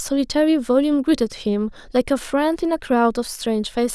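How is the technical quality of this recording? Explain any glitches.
The recording's technical quality is good, and there are no glitches to explain.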